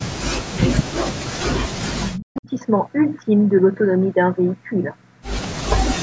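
Speech suppressed in double talk at 0.0 to 0.12 s: the voice drops out almost completely, likely because an echo canceller turned down the talker while the far side spoke at once. The same deep cut-outs, roughly 40 dB down, return from 0.88 to 1.74 s and from 1.94 to 2.48 s, chopping the speech into fragments.

Echo leak at 5.42 to 5.47 s: a faint delayed copy of the voice, about 20 dB below the speech and 187 ms late. This is likely loudspeaker pickup that the far side's canceller failed to remove.

Speech suppressed in double talk again from 5.54 to 5.81 s: the voice is pushed far down once more for around a third of a second.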